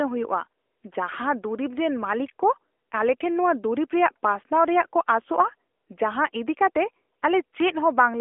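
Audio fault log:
Throughout: AMR narrowband mobile codec. The speech is squeezed into a telephone band of roughly 300 Hz to 3.4 kHz, and nothing is heard above 3.7 kHz. The result is thin and boxed in. The codec rebuilds speech from a vocal-tract model excited by a few pulses in each short subframe. That leaves a plainly audible buzzy, synthetic edge on the speech, which fits a mid-rate mode around 10.2 kbps.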